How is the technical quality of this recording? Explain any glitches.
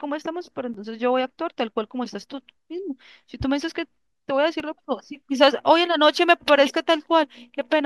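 The recording has two brief dropouts, both a block of digital silence. At 0.74 s the audio drops to silence for about 8 ms, and at 4.60 s for about 2.7 ms, which fits a 128-sample buffer at 48 kHz. Each happens because a stretch of output samples went out as zeros, usually when processing misses its buffer deadline. The signal jumps to silence and back with no fade, so each gap is heard as a tick or dip.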